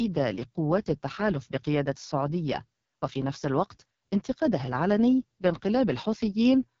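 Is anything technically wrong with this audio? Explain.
Yes. The whole clip carries heavy AMR wideband (HD Voice) codec damage. Speech sounds rough and raspy, which fits the lowest 6.6 kbit/s mode. The vocal tract model gets too few pulses, and the top band is only shaped noise. Nothing sounds above about 7.3 kHz.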